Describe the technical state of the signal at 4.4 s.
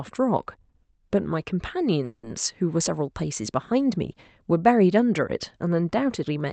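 At 4.4 s the speech passes cleanly through the call path, with no dropout, glitch or other fault at that moment.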